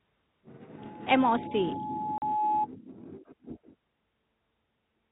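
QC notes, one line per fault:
0.77–2.67 s, loudspeaker feedback squeal: A pure tone at 850 Hz appears under the speech and swells over roughly a second and a half until it sits around 5 dB above the voice. The microphone is hearing the loudspeaker it drives, and at 850 Hz the round trip returns more than it sends. That single frequency feeds on itself and grows until the amplifier limits it or the loop is broken.
2.18–2.22 s, packet loss filled with silence: In the middle of the squeal, both the speech and the tone drop out completely for 40 ms, with hard edges. The receiver got nothing for that stretch and played silence rather than trying to conceal the gap. The length fits two consecutive 20 ms packets going missing. Around the gap, the narrow telephone band of the G.711 coding shows no audible damage of its own.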